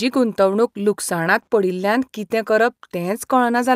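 At 1.43 to 1.49 s, just before "पडिल्ल्यान कितें", a short concealed packet loss occurs: about 40 ms of speech arrived too late. The decoder filled it by extending the preceding sound, so a brief smear is heard. On a spectrogram, the preceding sound stretches across the gap, then rejoins.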